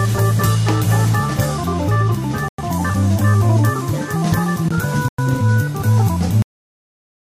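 At 2.48 s the sound stops dead for 100 ms, resuming at 2.58 s. The same hole returns at 5.08 s, ending at 5.18 s. This is a gap between chunks. The audio was delivered in blocks about 2.5 s long, and silence was inserted at each join. Nothing is missing from the content; it is simply pushed later. Each hole has hard edges, and the even spacing gives it away as a chunking fault.

At 6.42 s the audio is cut off in the middle of a sound. This is a cut-off end. The final buffers were never written or played out, so the signal falls straight to digital silence. There is no natural decay or fade. That silence continues for the remaining 0.8 s or so, to the end of the clip.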